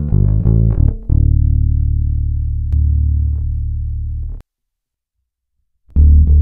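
From 2.73 s to 4.41 s a doubled audio track appears: a second full-band copy trails about a second behind, at roughly equal loudness, likely from a slower second capture path. Unlike an echo or reverb, it has no decay or room colour, and it cuts in and out abruptly.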